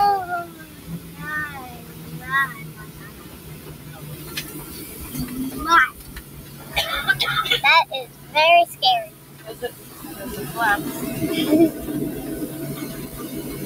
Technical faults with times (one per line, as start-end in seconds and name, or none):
0.00-13.65 noise suppressor applied to music or sounds
0.45-1.22 sound cut by the noise suppressor
1.69-2.22 sound cut by the noise suppressor
2.58-4.30 sound cut by the noise suppressor
6.00-6.72 sound cut by the noise suppressor
8.07-8.34 sound cut by the noise suppressor
9.10-9.46 sound cut by the noise suppressor